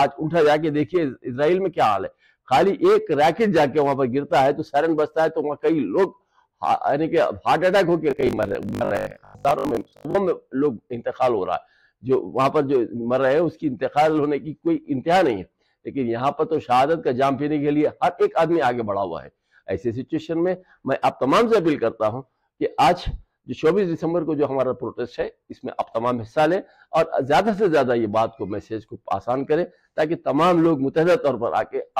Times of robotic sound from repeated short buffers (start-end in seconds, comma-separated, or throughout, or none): 8.11-10.15